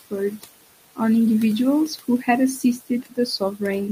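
Noise suppressor artifacts run through the whole clip. The suppressor pulls down bands it judges to be steady noise, by about 18 dB. The room noise, sitting about 18 dB under the speech, sinks in the pauses and rises under the speech.

From 2.63 to 3.18 s comes speech cut by the noise suppressor. It mistakes quiet parts of the speech for background and turns them down by up to about 18 dB. Roughly a tenth of a second in total sounds swallowed and faint.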